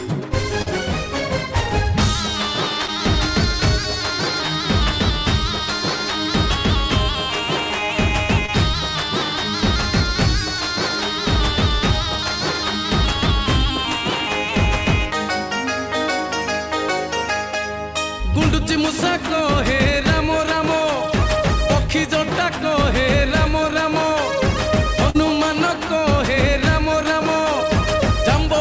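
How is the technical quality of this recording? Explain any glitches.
The recording has four brief short concealed packet losses, at 0.62–0.68 s, 2.86–2.90 s, 8.46–8.50 s and 25.10–25.16 s, where a few hundredths of a second of audio arrived too late. The missing stretches are about 40, 20, 20 and 40 ms, which fits one or two lost 20 ms packets. The receiver covered each gap by extending the preceding sound and then crossfading back. Each one is heard as a short smear or wobble. On a spectrogram, each gap shows as a smeared or repeated vertical slice. In the waveform, the repeated cycles blend back into the real audio at the joins. Across the clip, nothing appears above 8 kHz, which fits a wideband call codec such as G.722.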